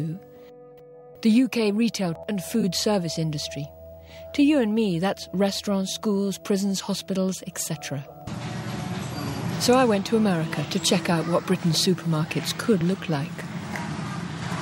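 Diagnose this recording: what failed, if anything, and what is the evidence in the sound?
Brief smeared, phasey blips at 2.61 to 2.63 s and 12.78 to 12.81 s: AAC frame loss with concealment, each gap consistent with one lost frame, about 21 ms, filled from prior spectrum.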